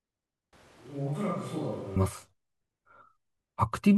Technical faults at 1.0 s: switch to a distant microphone

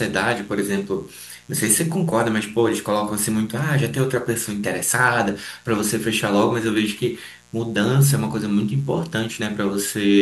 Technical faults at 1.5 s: mains buzz

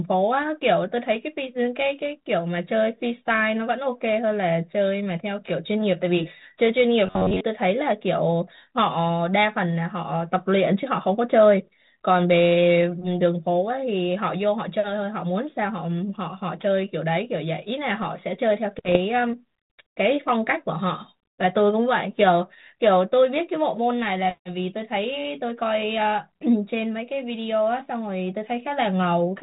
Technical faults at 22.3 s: none

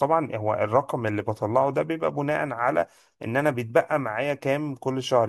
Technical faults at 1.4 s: none

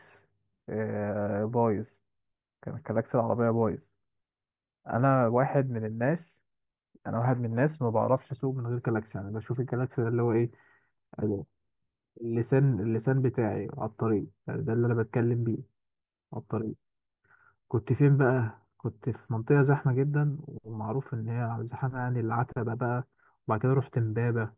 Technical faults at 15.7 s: none

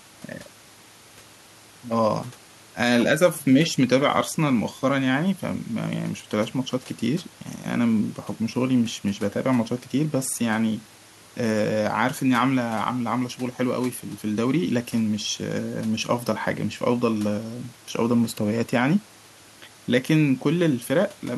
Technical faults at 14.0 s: none

